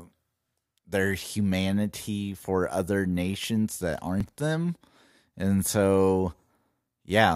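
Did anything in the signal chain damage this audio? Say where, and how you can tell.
Yes. Overlap between stream segments at the network stage. At 4.21 s, right after "for other nations that", there's a tiny skip. Trimmed overlapping timestamps dropped real audio, fitting 4-second segments.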